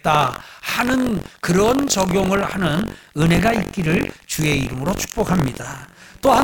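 Throughout the speech, buffer tearing adds a robotic rattle at 46.9 Hz, which fits a 1024-sample buffer. Writer and reader have slipped, so about a tenth of each period replays audio roughly 100 ms stale. Unlike underrun dropouts, it leaves no silent gaps and disappears in pauses.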